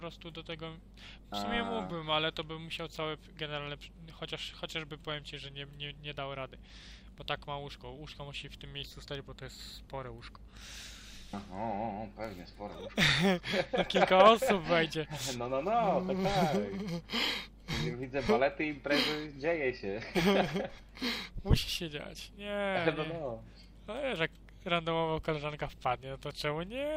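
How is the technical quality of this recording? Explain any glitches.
Nothing stood out on listening; no glitches could be heard anywhere in the recording.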